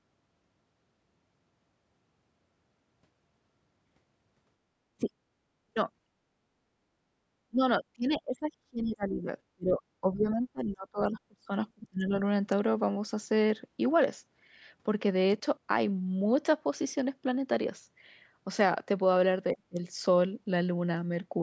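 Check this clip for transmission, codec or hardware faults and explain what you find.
One fault recurs through the speech: stretches of it are suppressed in double talk at 4.97–5.12 s, 5.67–5.89 s, 7.49–7.62 s, 7.78–9.27 s, 9.55–9.82 s, 10.01–11.52 s, 11.74–12.14 s and 19.54–19.80 s. The level falls by about 25 to 35 dB, in bursts from a fraction of a second up to about a second and a half, so the talker dips or drops out in pieces. The likely cause is an echo canceller that, with both ends talking, cannot tell near speech from loudspeaker echo and turns everything down. On a waveform these appear as sudden hollows in the envelope. On a spectrogram they show as near-blank vertical bands across all frequencies up to the 8 kHz upper limit of the call bandwidth.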